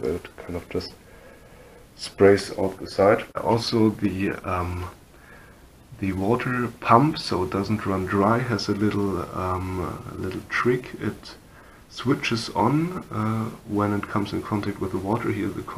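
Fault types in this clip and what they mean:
call bitrate drop: the encoder was forced to far fewer bits, consistent with about 22 kbps, so from 2.76 to 4.67 s the audio turns coarse and muffled.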